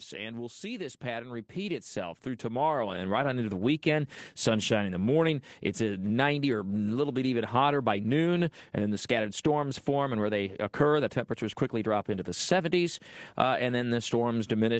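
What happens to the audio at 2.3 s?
The speech and the background around it are swelling together, growing steadily louder from 1.0 s, just after "we'll see this", until 3.33 s, where the level settles before "into the weekend". At 2.3 s the rise is partway through. This is automatic gain rising. The call's gain control judged the input too quiet and lifted its gain slowly, by about 9 dB in total, so everything climbs at once rather than the speech alone.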